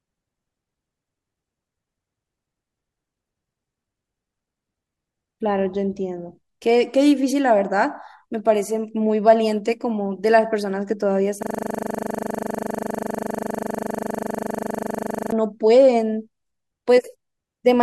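From 11.43 s to 15.32 s the speech stops and turns into a rigid, mechanical buzz: one 40 ms fragment plays back identically, end to end, close to a hundred times, so the sound pulses at 25 Hz with no variation at all. This is a system hang loop. The computer or audio driver stalled, and the sound hardware went on replaying the last chunk left in its ring buffer until playback recovered.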